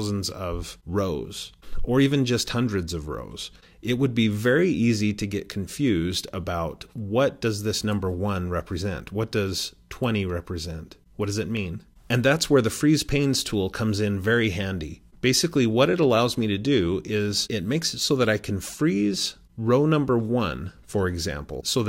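At 2.06 s and 11.57 s, single sharp clicks are likely dropped samples: a fraction of a millisecond vanishes, making the waveform jump. Unlike a dropout, no sound goes missing.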